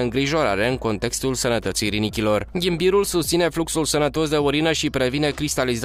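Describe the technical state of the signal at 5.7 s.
At 5.7 s the signal is intact, with no technical fault to be heard at that point.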